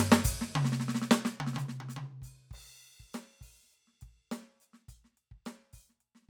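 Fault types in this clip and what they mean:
Nothing in this music stands out as a technical fault, so there's nothing to list here.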